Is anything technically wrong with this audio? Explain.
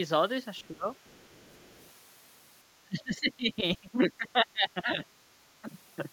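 Yes, two related echo-cancellation faults appear in this speech clip.

Other side's voice leaking through, from 0.58 to 0.68 s and again from 1.0 to 1.9 s, is a faint second voice far below the main talker, very quiet at first and slightly louder in the longer stretch. The likely cause is loudspeaker echo left behind by the canceller. Unlike suppression, it adds sound rather than removing it.

Speech suppressed in double talk hits from 0.63 to 0.86 s, from 2.85 to 5.0 s, and briefly at 5.62 s. The talker's level drops by up to about 20 dB, and by less at 5.62 s. This is likely the canceller turning everything down while both sides overlap. It is a dip in the main voice, not an added one.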